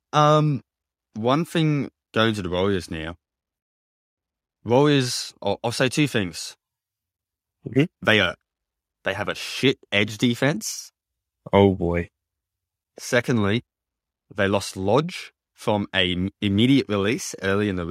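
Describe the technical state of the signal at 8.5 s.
At 8.5 s the speech signal is intact, with no dropout, clipping, glitch or other fault audible at that moment.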